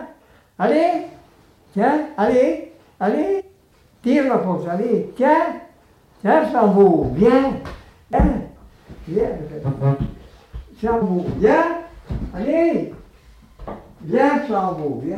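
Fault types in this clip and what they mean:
Damaged data in a compressed stream: parts of the encoded stream arrive corrupted, so the decoder misreads those frames, loses sync and hunts for the next valid header. Here it gives three brief glitches, at 3.39–3.41 s, 8.13 s and 11.01 s.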